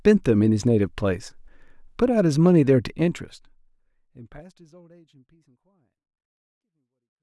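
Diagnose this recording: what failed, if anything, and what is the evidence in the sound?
Nothing in the speech recording points to a failure at any stage of the chain. The level fades out smoothly from around 3 s to the end, the gradual tapering an editor would apply, with no click or hard edge.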